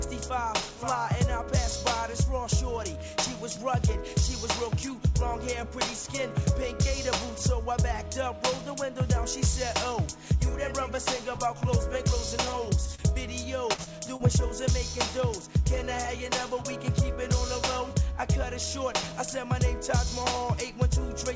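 At 12.95 to 13.01 s there is a brief smear or wobble. This is short concealed packet loss: about 30 ms never arrived, and the receiver extended the preceding sound to bridge the hole.

At 13.73 to 13.81 s the sound stretches into a held, fading tail and then jumps ahead. This is a burst of packet loss, with about 60 ms lost and covered by continuing the last sound and turning it down.

Two more short smears of the first kind follow, at 13.84 to 13.89 s and 14.16 to 14.22 s. Each is a 30 ms gap patched the same way.

Throughout the clip, nothing is heard above 8 kHz, which is the call codec's bandwidth.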